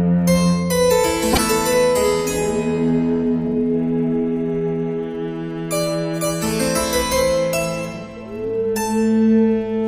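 At 1.32 s the audio jumps forward and the next 70 ms, to 1.39 s, comes out garbled instead of continuous sound. The likely cause is a broken MP3 bit reservoir: after a cut, the following frames look back for borrowed bits and decode another frame's bytes. The span fits two or three 26.1 ms frames. The waveform shows a discontinuity there.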